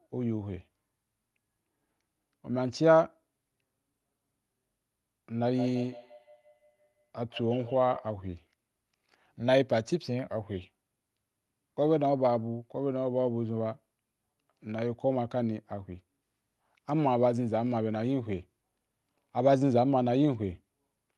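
From 5.44 s to 8.15 s, each word returns as a thin, ringing copy roughly every 150 ms, a repeat rate that points to a feedback echo between two devices. The repeats peak at about 17 dB below the speech. Two devices on the same call sit in one room, so one plays what the other's microphone sent, and that microphone picks it up again. Each echo canceller removes only its own device's playback, so the sound circulates. The speech tops out near 12 kHz, the band limit of the Opus call path.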